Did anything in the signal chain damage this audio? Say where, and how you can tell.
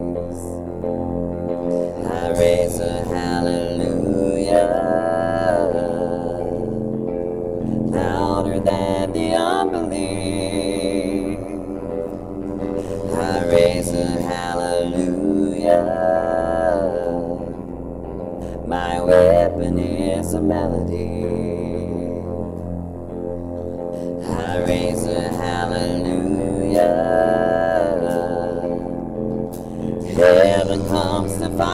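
Yes. A frame-based processing stage reassembled the audio by overlap-add with windows whose overlaps don't sum to constant gain. The result is overlap-add ripple throughout: each frame the level plunges by about 60 dB, roughly a hundred times a second, heard as a metallic buzz with extra tones around each note.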